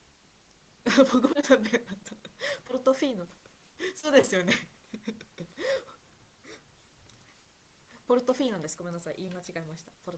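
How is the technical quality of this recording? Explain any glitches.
No glitches can be heard anywhere in the recording. The speech has the sound of a call line, with the lowest bass trimmed and nothing above about 8 kHz, which fits wideband Opus coding at a modest bitrate.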